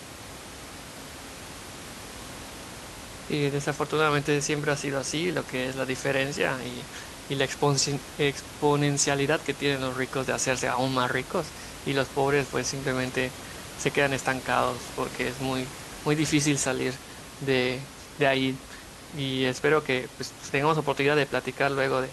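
No technical faults can be heard in this speech clip at any point.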